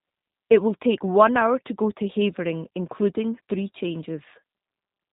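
G.729 codec damage runs throughout this speech clip. The speech is rebuilt from a vocal tract filter, a pitch predictor and sparse pulses, giving a plainly rough, synthetic texture, with nothing above 4 kHz, which fits an 8 kbit/s G.729A stream.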